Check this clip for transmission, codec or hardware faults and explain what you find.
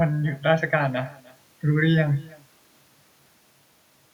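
One fault runs through the whole clip: echo with no canceller. The far end's microphone picks up its own loudspeaker and returns the speech over the network unremoved, so every phrase is trailed roughly 300 ms later by a faint, thin copy about 25 dB down.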